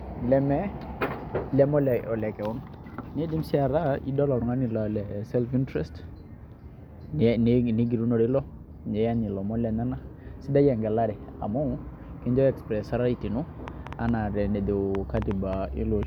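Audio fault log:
13.68–16.04 s, train of clicks: a repeating pulse gets into the signal path, likely interference from nearby equipment or a faulty connection or power supply. About ten sharp clicks of much the same shape land at an uneven pace, averaging 3.83 per second, and stand roughly 10 dB above the speech at their peaks. They are heard as irregular ticking laid over the speech and carrying into the pauses, running until the clip ends.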